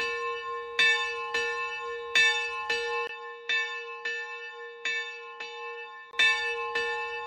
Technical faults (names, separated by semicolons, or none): input switched to a poorer device